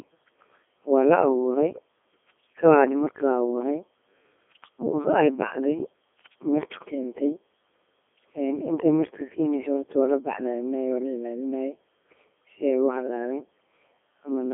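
From start to finish the speech has passed through a Codec 2 vocoder, with heavy damage. The decoder rebuilds the voice from pitch, voicing and a coarse spectral envelope using sine waves, so the result sounds robotic and buzzy, with a rate that fits about 3.2 kbit/s. Content sits in a 200 Hz to 3.4 kHz line band, with nothing above 3.6 kHz. Unlike simple telephone band-limiting, the waveform itself is resynthesised rather than merely filtered.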